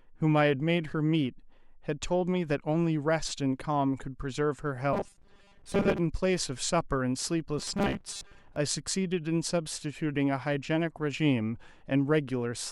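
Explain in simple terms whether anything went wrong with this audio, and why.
Twice the speech turns hard and metallic, like a robot buzzing along with the words: from 4.93 to 6.01 s, and again from 7.59 to 8.56 s. This is robotic sound from repeated short buffers. New audio was likely arriving too slowly, so the software kept replaying a tiny 5 ms slice to fill the gaps, which forces a steady 200 Hz buzz. Most of the first stretch and about half of the second is replayed filler.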